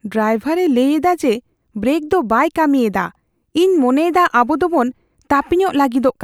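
A speech recording with no technical fault to point to. Nothing in it calls for a time, a value or a cause.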